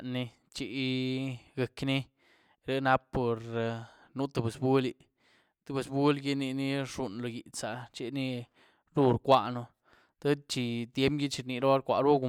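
Nothing here needs flagging: the speech runs along without any technical fault to point to.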